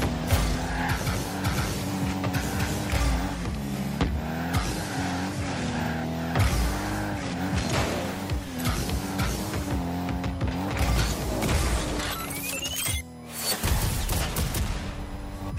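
A USB whine runs through the whole clip: a steady, fixed-pitch 1 kHz tone sitting roughly 30 dB below the sound. It comes from current drawn in the bus's 1 ms frames leaking into the audio path through shared power or ground.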